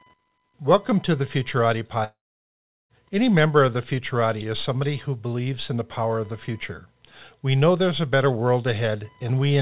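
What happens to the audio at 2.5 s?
The sound breaks off from 2.04 s to 2.91 s. A brief fading buzz carries on from the last sound, then there is near silence until the speech returns with part of it missing. This is likely a long network dropout: for most of a second no audio arrived, so the receiver extended what it last had and then gave up, and the lost stretch was never played.

Underneath, a faint buzzing whine with a pulse rate of roughly 1 kHz sits far below the speech and continues through this moment. This is computer activity noise: changing load from the processor, graphics card or mouse disturbs the ground shared with the audio circuit, so it follows the machine rather than the sound.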